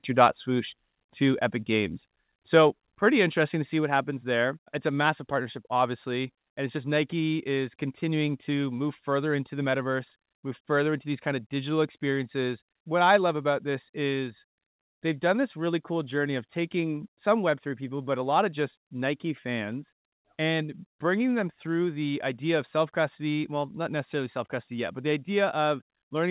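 The speech level drops suddenly three times: at 1.02 s by about 2 dB, at 2.7 s by about 3 dB, and at 3.72 s by about 2 dB. Each is a clean step down. The likely cause is microphone volume stepped down by the call software, over a call path whose audio stops at 4 kHz.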